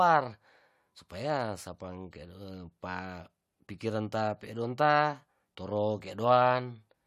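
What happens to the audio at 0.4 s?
At 0.4 s the speech plays through intact, with no dropout, click, distortion or other fault at that moment.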